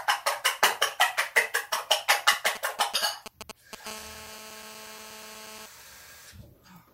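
From 2.32 to 3.75 s, GSM signalling bursts break in. A 2G phone close by is sending short groups of radio bursts, as it does while setting up a call or message. The audio circuit rectifies those pulses and turns them into sound. The result is a galloping dit-dit-dit of brief buzzes at about 217 Hz. They sit roughly 10 dB below the wanted sound.

From 3.87 to 5.66 s, a GSM phone buzz takes over. A 2G phone nearby is now in a call and transmits in bursts. Its bursts repeat 217 times a second. The circuit demodulates them into a hard, raspy buzz with many harmonics above the 217 Hz fundamental. It is nearly steady and has no relation to the sound itself. It runs at about 18 dB below the signal, quieter than the earlier bursts.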